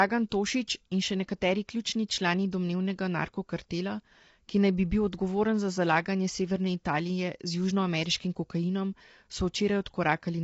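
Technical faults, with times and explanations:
Throughout: low-delay AAC compression. The speech sounds rough and grainy, with noise filling the gaps between harmonics. Nothing is heard above about 7.8 kHz. The cause is likely AAC-ELD, whose short frames resolve pitch poorly at a low bitrate around 24 kbps.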